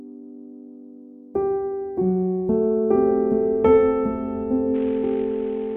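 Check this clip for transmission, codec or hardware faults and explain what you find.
One fault: a Bluetooth SBC bit pool drop from 4.74 s to the end at 5.76 s. With bits squeezed on a congested link, the upper sub-bands starve and the rest are coarsely quantised, so treble dulls and gritty noise rises. This fits a bit pool falling from 28 to 5, near 54 kbps.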